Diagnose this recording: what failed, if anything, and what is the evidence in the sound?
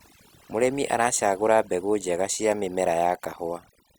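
Overdone noise removal throughout: aggressive suppression gates bands near the noise estimate, taking quiet parts of the speech with them and leaving near-silent twinkling gaps.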